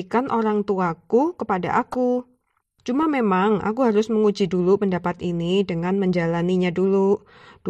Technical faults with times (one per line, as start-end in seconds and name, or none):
1.91-1.96 corrupt frame decoded